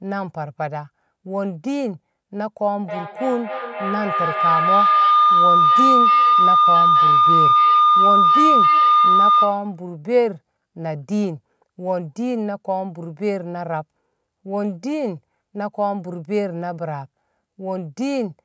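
Feedback howl runs from 2.83 to 9.86 s. Two devices sharing the room are both on the call, so the loudspeaker's output re-enters the microphone and gains level on each circuit of the loop. Instead of fading, the repeats swell and narrow to a tone of around 1 kHz, pulsing at roughly a third of a second, and peak about 7 dB above the speech before the loop is broken. Above it, the call's microphone processing leaves nothing over 8 kHz.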